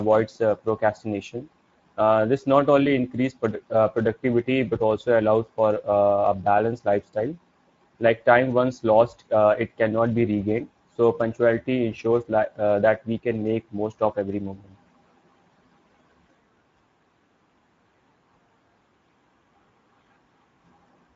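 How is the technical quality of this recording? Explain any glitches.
The recording has audible codec degradation throughout. It is Speex coding, present for the whole clip. This CELP codec has too few bits to model the excitation accurately, so the speech sounds hoarse and noisy, consistent with roughly 17 kbps. A spectrogram shows a hard ceiling at 7.7 kHz, with the upper band looking smeared and noise-like rather than finely harmonic.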